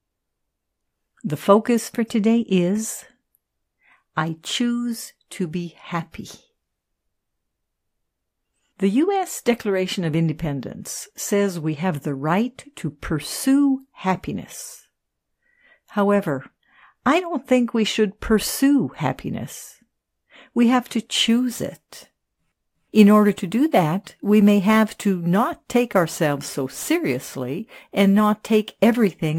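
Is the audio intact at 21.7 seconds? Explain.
No. From 21.30 to 29.30 s, crude rate conversion by repeating nearest samples (consistent with 32 kHz to 44.1 kHz) adds a gritty, inharmonic fizz about 25 dB below the speech.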